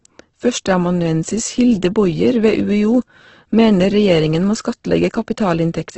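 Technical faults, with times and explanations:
Throughout, Opus compression: speech sounds grainy and rough with nothing above about 8.2 kHz, likely from heavy low-bitrate coding (12 kbps), noise-filled rather than swirly like MP3.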